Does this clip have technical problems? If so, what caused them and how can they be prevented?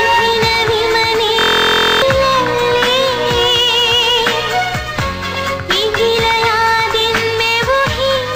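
Yes. A system hang loop occurs from 1.39 to 2.02 s. The computer or audio driver stalled while the sound hardware kept replaying its ring buffer, a 23 ms slice that fits a 1024-sample buffer. Repeated 27 times at 43.1 Hz, that slice becomes a steady buzz, and roughly 0.7 s of real audio is lost. To prevent this, run the audio thread at real-time priority on stable drivers, with a watchdog that mutes output when the buffer stops being refilled.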